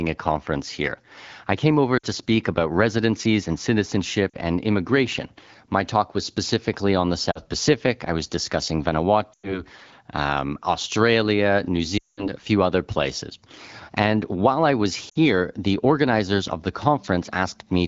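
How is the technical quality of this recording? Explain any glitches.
The recording has six dropouts from lost AMR speech frames, at 1.97–2.06 s, 4.30–4.37 s, 7.32–7.39 s, 9.34–9.62 s (just after "I was discussing"), 11.97–12.29 s (just before "a few other places") and 15.09–15.18 s (between "while I was" and "the organizers of the"). Radio errors corrupted frames, so the AMR-WB decoder, whose clear sound fits a rate around 12.65 kbit/s, repeated the last good pitch and vocal tract settings at falling gain. The short gaps, about 40–60 ms, drop to near silence within two frames. The 100 ms and 200 ms runs stay near silent for longer, and the voice comes back weak or rough for a moment.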